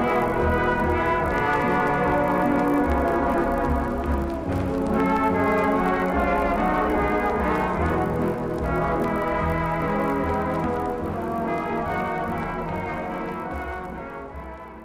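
Throughout the clip, the resampler restarted on every block. The audio was converted from 24 kHz to 48 kHz in separate 20 ms pieces. Each piece was processed without its neighbours, so the converter lacked the true samples at both edges. Every boundary picks up a small error. At a 50 Hz rate these errors merge into a low buzz rather than separate ticks. The buzz rides on the sound and drops away in silence.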